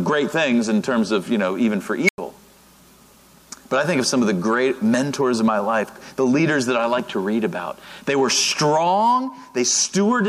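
An unstable filter fault occurs from 2.05 to 2.18 s. A recursive filter stage has lost stability, so each pass feeds back more energy than it lets decay, and its output grows without bound. A whistling tone around 2 kHz swells to clipping within about 40 ms. The values then overflow and the output drops out, leaving roughly 95 ms of silence before the filter resets and sound returns.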